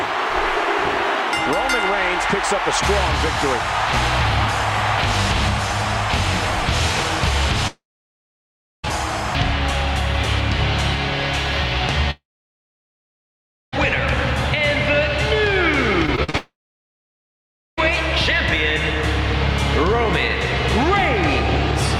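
The audio has three gaps where the sound carries on as a brief fading buzz and then goes quiet: 7.67 to 8.85 s, 12.11 to 13.74 s, and 16.37 to 17.79 s. Each runs about 1.2 to 1.6 s, mostly silence, and then picks up further on with that stretch simply gone, likely a long network dropout each time. Right before the last one, from 16.06 to 16.35 s, there's repeated packet loss with a choppy, robotic sound: five short holes, the longest 44 ms, each patched by stretching the previous sound, so roughly 38% of that bit is filler.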